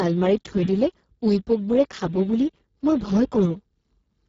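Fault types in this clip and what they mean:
Speex codec: throughout, this speech has been squeezed through a CELP speech codec at a very low rate, which fits roughly 6 kbps, leaving too few bits for the excitation, so the voice sounds heavily hoarse, noisy and edging toward robotic, with nothing above about 7.7 kHz.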